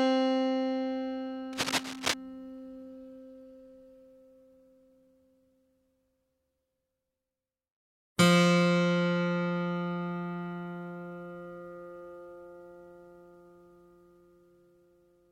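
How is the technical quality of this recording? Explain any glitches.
One clear glitch is audible: a burst of cable scratch noise from 1.53 to 2.14 s. It is a ragged scratching rustle at roughly the same loudness as the recording itself. It likely comes from a worn cable or connector being moved, so its contact resistance fluctuated rapidly. On a spectrogram it appears as dense, irregular broadband streaks, and the waveform shows spiky, uneven bursts.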